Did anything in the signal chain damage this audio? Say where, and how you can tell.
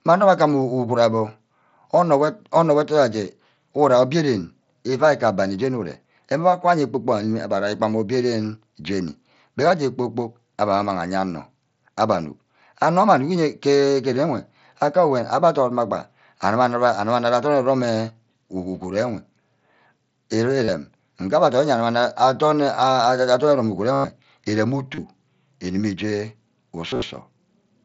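Yes, concealed Bluetooth headset packet loss on the headset-to-phone radio link. At 20.65, 23.93–24.04, 24.95 and 26.90–27.02 s, gaps of 30 to about 110 ms were filled by repeating the last waveform cycle. The spectrogram shows flat, evenly spaced harmonics, and the waveform shows a periodic, full-level stretch.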